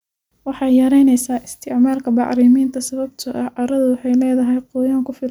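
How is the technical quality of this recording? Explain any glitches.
No glitches or faults detected.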